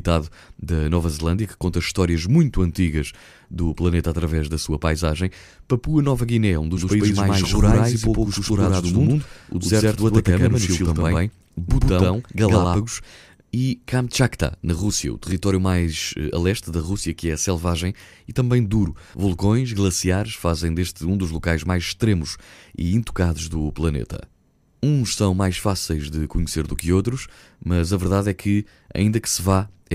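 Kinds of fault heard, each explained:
Doubled audio track: from 6.77 s to 12.79 s the speech is heard twice, a second full-band copy at about the same level trailing by around a tenth of a second, dry and starting and stopping abruptly; likely a second capture path or misaligned edit.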